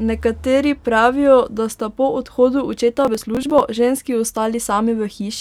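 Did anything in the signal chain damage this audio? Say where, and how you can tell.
Yes. The damage is at the driver or buffer stage. From 3.05 to 3.60 s, just after "sta po odhodu očeta", a gritty crackle tears through the speech. This is processor overload crackle. Around twenty buffers of roughly 10 ms each missed their deadlines and were skipped, leaving hard-edged gaps.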